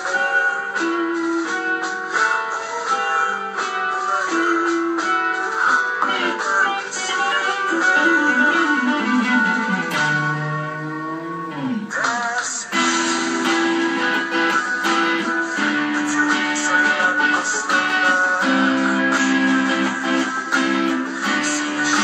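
Nothing in the recording stood out as a technical fault on listening.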